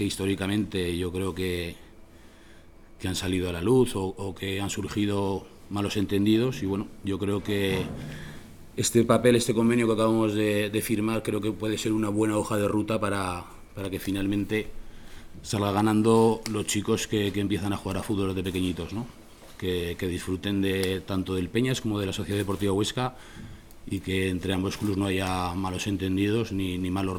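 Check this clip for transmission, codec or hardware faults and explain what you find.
Nothing here sounds off; I listened all the way through and didn't hear any transmission, codec or hardware faults.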